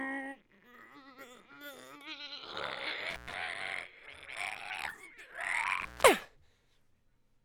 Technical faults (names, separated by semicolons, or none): intermittent contact